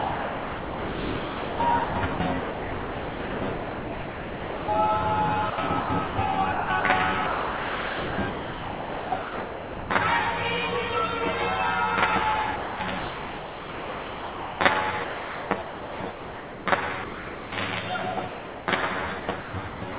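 Hollow, phasey colouring runs through the whole clip, with fixed notches starting at around 50 Hz. This is channel delay (comb filtering): one channel lags by roughly 10 ms, and the mono sum cancels evenly spaced frequencies. The sound is also band-limited to 4 kHz by the call path's G.711 codec.

From 0.0 to 4.68 s the sound is choppy, with comfort noise filling in for almost 4 s of that stretch. The same happens from 5.5 to 9.9 s, with about 3 s replaced, and from 12.56 to 17.52 s, with about 3.7 s replaced. This is sound chopped by the voice detector, which likely switched transmission on and off and let comfort noise fill the gaps.

From 18.28 to 18.68 s the sound gives way entirely to steady noise for 0.4 s. This is sound dropped by the voice detector, which likely treated the sound as background and stopped sending.

From 19.2 s to the end, the choppy sound returns, with about 0.43 s swapped for comfort noise.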